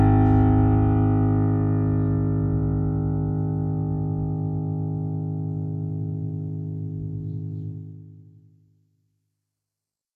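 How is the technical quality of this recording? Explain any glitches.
The music carries plainly audible codec damage from start to finish. The likely cause is HE-AAC compression at a very low bitrate, which fits about 16 kbps. Only the lower spectrum is truly coded. The treble is rebuilt by copying lower bands upward, so its harmonics don't line up with those below. High content sounds gritty and metallic. Nothing reaches above 15 kHz. The smooth fade-out from about 7.5 s to 10.2 s ends without a click.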